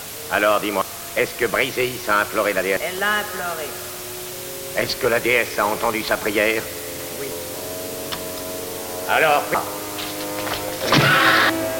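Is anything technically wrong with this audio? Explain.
Yes, there are two faults. Throughout, low bit depth with dither: only 5 bits are used, and dither turns the rounding error into a steady, even hiss, roughly ten decibels below the signal. At 0.82, 2.77, 7.32, 9.55 and 11.50 s, damaged data in the compressed stream makes the decoder misread frames and resynchronise, producing brief chirps or blips.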